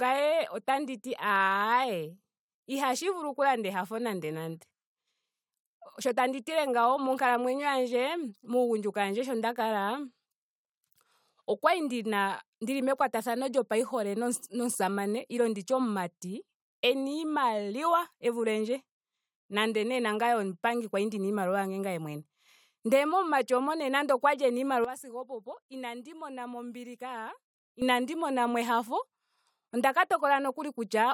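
A gain setting was likely applied without any ramp at 24.85 s, right after "moka nande okwali ena", dropping the speech and its background noise together by about 12 dB in a single step. This sudden gain jump holds until 27.82 s, recovering just before "mona mo".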